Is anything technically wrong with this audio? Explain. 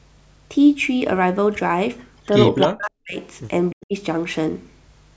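Yes. From 2.60 to 2.67 s there is a brief echo leak: a copy of the speech about 306 ms late and about 10 dB down, likely an echo canceller letting loudspeaker pickup through. Its clear, fixed delay separates it from room reverberation.

From 2.67 to 3.18 s and from 3.70 to 3.94 s, the speech is suppressed in double talk. It sinks by around 40 dB, most likely because the canceller ducks everything while both sides speak.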